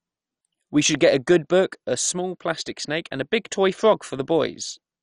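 Throughout the speech, the sound is dull and carries a gurgling, granular roughness, likely from MP2 compression at a rate that fits about 48 kbps. Nothing survives above 11.3 kHz, and the remaining sub-bands flicker coarsely, unlike a clean low-pass filter, which removes treble without that churning grain.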